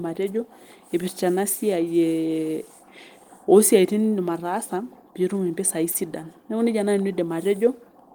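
At about 5.91 to 5.95 s there's a short concealed packet loss. Roughly 30 ms of the speech didn't make it to the decoder in time, so the receiver papered over the gap, about 28 ms of it, by carrying on from the sound just before, then crossfading back into the real audio. You hear it as a quick smear or wobble, and anything very brief in that spot may simply drop out.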